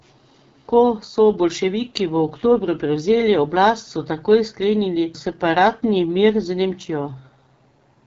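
Throughout, AMR wideband (HD Voice) coding at a rate pointing to about 8.85 kbit/s makes the speech rough and raspy, with nothing above 7.6 kHz, unlike plain band-limiting's clean dullness.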